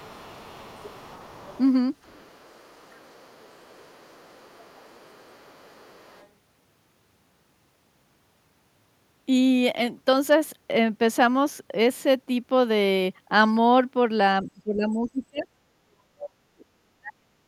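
From 0.0 to 1.59 s and again from 2.02 to 6.28 s, the other side's voice leaks through faintly, roughly 25, then 30 dB below the speech. This is likely loudspeaker echo the canceller missed. A spectrogram shows a weak second harmonic pattern beneath the talker.

At 14.43 to 15.47 s, 15.84 to 16.66 s and 16.95 to 17.44 s, the speech is suppressed in double talk. The talker's level falls by about 25 dB, then about 40 dB, likely from the canceller ducking both sides. The waveform shows deep notches, and the spectrogram thins there.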